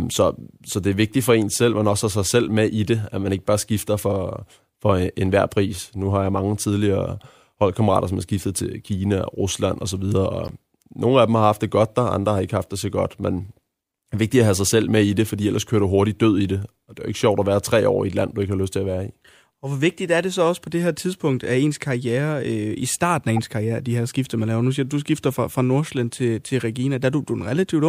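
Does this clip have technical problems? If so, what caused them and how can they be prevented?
Yes: a corrupt frame decoded at 10.46–10.51 s (after "osv og"), 14.19 s (before "vigtigt at have sig") and 23.36–23.39 s (after "øh i starten af"). Flipped bits misplace energy, giving short chirps and blips rather than the gap or smeared repeat of a dropout. Checksums that discard damaged frames, plus error correction on the link, prevent it.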